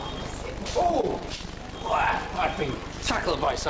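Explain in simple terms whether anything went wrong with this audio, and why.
Between 0.92 and 1.46 s there is repeated packet loss, which gives a robotic sound. Pieces of the audio went missing four times in that short stretch. Each hole was patched by stretching the sound just before it. The longest hole lasts 23 ms. About 13 percent of that stretch is patched sound. The audio also came through a call connection, so nothing above 8 kHz can be heard.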